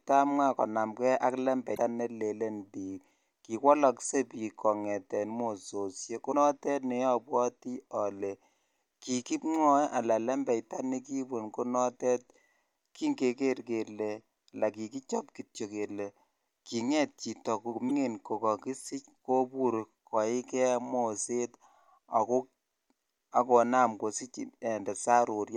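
A likely broken MP3 bit reservoir causes short glitches in this speech at 1.74–1.78 s, 6.31–6.34 s and 17.88–17.91 s, each about one to one and a half 26.1 ms frames long. Frames that borrowed space from earlier ones seem to have lost those bytes when frames were cut, so the decoder read the wrong data. Each time the sound skips forward and leaves a brief chirp, noise burst or gap.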